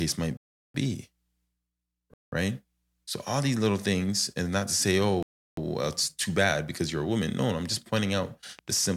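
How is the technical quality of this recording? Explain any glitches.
The recording has two kinds of fault: three dropouts to digital silence and a burst of ticking at the end.

From 0.37 to 0.74 s, 2.14 to 2.32 s and 5.23 to 5.57 s, the speech drops abruptly to digital silence. These are blocks of digital silence, where audio buffers weren't filled in time. The 372 ms and 186 ms gaps fit 16384- and 8192-sample buffers.

From 8.59 s to the end, a train of clicks ticks steadily about 11.7 times per second, roughly as loud as the speech. The regular pace points to a likely cause of electrical interference or a faulty connection or power supply injecting repeated pulses.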